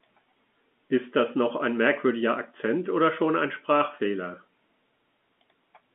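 No technical faults can be heard anywhere in the speech. The sound is limited to the telephone band of roughly 200 Hz to 3.5 kHz, which fits G.711 telephone coding on an ordinary fixed line.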